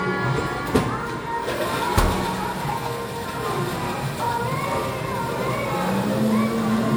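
Throughout the clip, the sound has a swirly, smeared, hollow quality, and sharp attacks blur. This points to generation loss. The audio was likely encoded as MP3 several times, perhaps four, at a rate that fits 96 kbit/s. Each pass added fresh noise and spectral holes.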